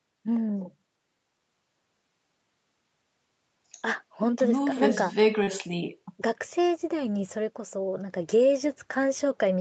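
A speech recording carried over a call, with everything above 8 kHz gone, which points to a wideband Opus stream. From 5.43 to 5.50 s there is short concealed packet loss: roughly 40 ms never arrived, and the decoder bridged it by extending the preceding sound before blending back. It is heard as a brief smear or wobble.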